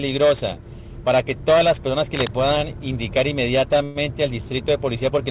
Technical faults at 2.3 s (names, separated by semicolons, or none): cable scratch noise